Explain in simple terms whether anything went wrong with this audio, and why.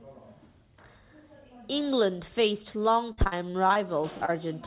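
Between 3.12 and 3.78 s the network dropped or delayed pieces of the call six times in quick succession, the longest gap about 54 ms. This is repeated packet loss, giving a robotic sound. The receiver patched each gap by stretching the last sound, so about a quarter of that stretch is filler, and the speech turns choppy.

Near the end there is also short concealed packet loss, with one hole between 4.18 and 4.33 s and another between 4.25 and 4.30 s. Brief bits of sound arrived too late and were papered over by continuing what came just before, leaving a quick smear or wobble there. The speech sounds a bit muffled throughout because this phone-style call line carries nothing above 4 kHz.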